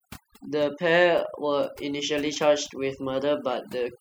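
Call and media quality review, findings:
Artifacts throughout; background dropped and broken up into twinkling specks between phrases. Overdone noise removal: noise suppressor set too aggressive, pulling individual frequency bands down whenever they sit near its noise estimate, taking quiet speech components with them.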